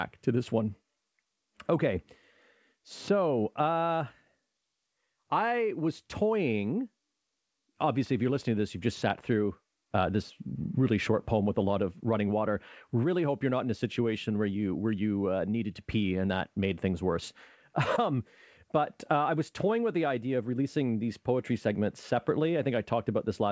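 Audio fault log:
No faults heard.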